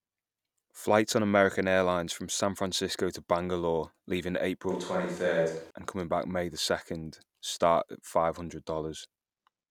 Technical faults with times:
4.70-5.71 switch to a distant microphone

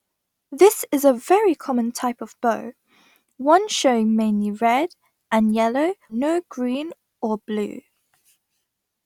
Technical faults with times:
6.09-6.14 stream segment skipped

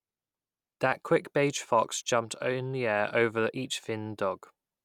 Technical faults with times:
none

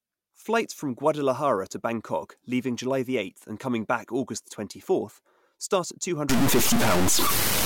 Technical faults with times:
6.29-7.66 stuck bit

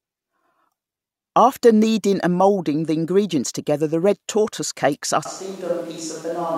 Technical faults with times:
5.26-6.58 switch to a distant microphone

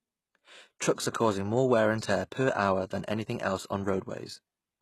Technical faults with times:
0.00-4.82 HE-AAC compression

